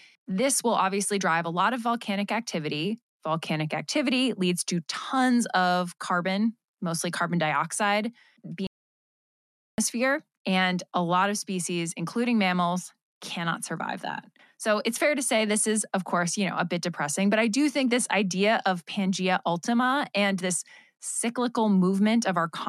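The player most likely ran short of buffered data or had its output thread held up, so nothing reached the output for a while. In this speech recording, that playback stall appears just after "carbon mostly carbon dioxide": at 8.67 s the sound cuts off abruptly mid-flow and the line stays silent for about 1.11 s, until 9.78 s, when the audio picks up again once the player recovers.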